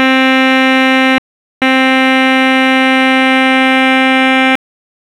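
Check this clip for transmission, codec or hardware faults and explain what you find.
Two faults are audible in this music. From 1.18 to 1.62 s, an audio dropout to silence removes 0.43 s of music, likely from a lost input link. The gap is silence with no room tone, unlike a fade or a quiet passage. At 4.55 s, damaged data in a compressed stream makes the decoder lose frame sync. The decoder then searches for the next frame header.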